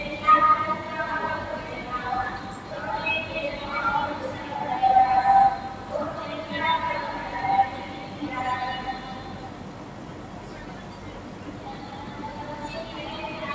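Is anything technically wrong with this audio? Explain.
Yes. A noise suppressor designed for speech was left on for these sounds, and it acts throughout the clip. Because it is tuned to keep speech and strip steady background, it treats sustained tones, ambience and decaying tails as noise and pulls them down, while sharp onsets pass largely intact. The level therefore swings by about 5 dB as the processing engages and releases, giving audible pumping and a thinned, fluttering quality on anything held or reverberant. The band stops at 8 kHz, which fits the call's microphone processing.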